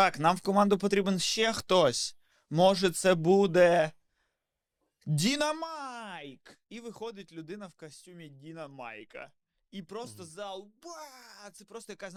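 No technical faults are audible.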